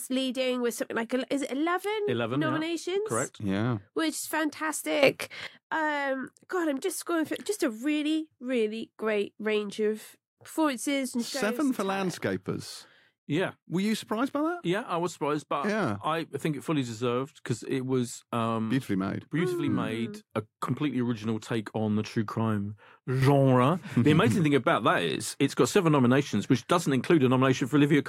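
Speech with two sudden gain jumps. At 5.03 s the level leaps up by about 13 dB until 5.47 s. After "on the true crime", at 23.22 s, it rises by about 6 dB to the end. Noise rises too, likely from unramped gain changes.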